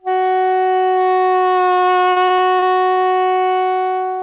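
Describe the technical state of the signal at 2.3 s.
Repeated packet loss (robotic sound) runs from 2.12 to 3.08 s: six gaps, the longest 54 ms, are patched by extending earlier sound, leaving it choppy and robotic.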